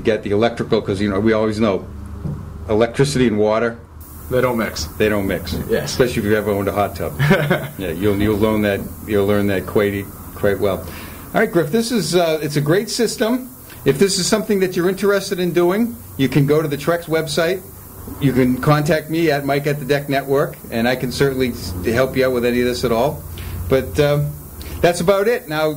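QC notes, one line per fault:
4.01–25.77 s, low bit depth with noise shaping. From 4.01 s to the end, a steady, thin hiss sits under the sound. It climbs strongly toward the top of the band. The signal is reduced to 7 bits, so each sample is rounded coarsely. The rounding error is fed back and pushed up in frequency, away from the lows and mids. That is why the noise is bright rather than flat. It stays roughly 20 dB below the signal.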